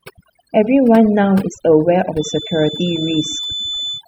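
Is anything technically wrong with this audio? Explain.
Yes, there are two faults. Overdone noise removal runs through the whole clip: the noise reduction was set far too aggressively, cutting any frequency band close to its noise estimate. The background drops and breaks up into twinkling specks.

From 2.08 s to the end there is a feedback whistle, likely from a loudspeaker-to-microphone loop hovering just under runaway gain. A single 3.5 kHz tone keeps ringing without building up, heard as a thin steady whistle roughly 10 dB under the speech, swelling and fading slowly in level.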